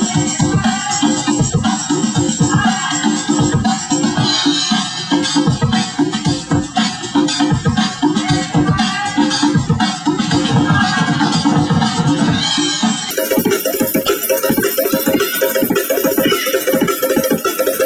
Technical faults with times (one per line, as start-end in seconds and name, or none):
13.11-17.86 section at the wrong speed